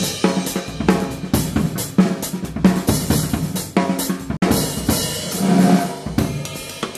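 At 4.37 s the audio drops out until 4.42 s, a digital broadcast dropout. The receiver stopped getting valid frames and muted, fading down in about 3 ms. Roughly 48 ms of programme is missing, consistent with two lost frames, before sound resumes.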